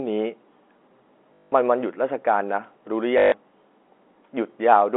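A short robotic stutter with a 50 Hz buzz breaks the speech from 1.34 to 1.52 s, and again from 3.18 to 3.32 s. This is packet loss with the last packet repeated. Audio went missing for 180 ms and then 140 ms, and the receiver kept replaying the final packet it had. The buzz rate points to 20 ms packets. The copies seldom join in step with the pitch.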